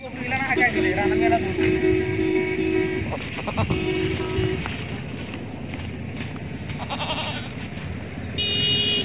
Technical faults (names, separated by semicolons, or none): none